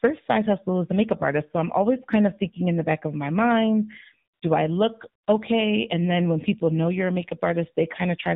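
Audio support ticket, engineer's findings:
Buzzy, synthetic speech, no content above 4 kHz, entire clip. AMR narrowband mobile codec (AMR-NB); coarse pulse-driven vocal-tract model, damage level fits a low mode around 7.4 kbps.

Background abruptly replaced by smooth, steady noise, 4.34–4.42 s (80 ms, after "back of my mind", before "do I look okay") and 5.24–5.28 s (40 ms, after "mind do I look"). AMR comfort noise: speech frames stopped, receiver synthesised filler noise.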